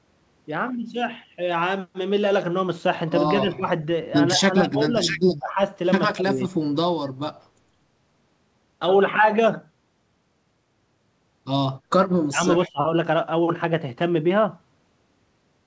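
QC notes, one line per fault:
3.3–3.67 s, 4.36–5.21 s, 5.38–5.6 s, 6.11–6.54 s, 12.29–12.42 s, 12.61–12.84 s: speech suppressed in double talk. The speech ducks in broken pieces, each lasting a few tenths of a second. The dips are around 15 dB early on and deepen to roughly 25–30 dB in the pair near 12.3 s. This is likely an echo canceller that could not separate the local talker from loudspeaker echo while the far side spoke, so it turned both down.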